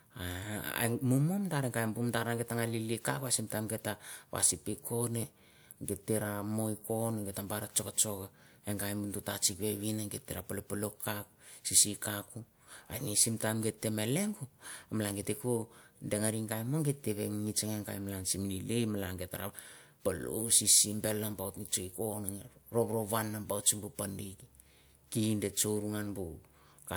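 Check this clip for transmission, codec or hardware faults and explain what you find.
No transmission, codec or hardware faults were found.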